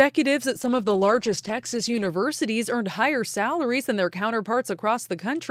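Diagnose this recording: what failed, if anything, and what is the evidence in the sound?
A call bitrate drop hit the codec stage from 0.56 to 2.15 s. The speech turns rough and muffled, with the highs cut away, for about 1.5 s. That fits the encoder falling from roughly 40 to 12 kbps after a bandwidth estimate dropped.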